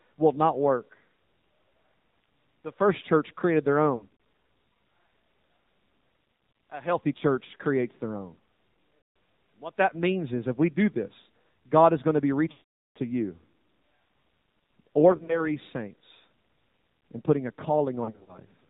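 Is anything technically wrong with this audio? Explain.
Yes. Throughout, the speech sounds buzzy, synthetic and muffled, with nothing above 4 kHz. This is the AMR narrowband mobile codec, and the plainly audible damage fits a low rate near 7.4 kbps.

The clip also has lost AMR speech frames. When a frame is lost, the decoder reuses the last good pitch and vocal tract settings at falling gain. Scattered short warbles and dips occur at 3.96 to 4.11 s, 15.12 to 15.50 s and 18.04 to 18.39 s. At 8.98 to 9.16 s, about 180 ms drawn out, the sound smears and weakens. At 12.52 to 12.97 s, 440 ms is lost, long enough for the sound to stretch and fade to silence before returning rough.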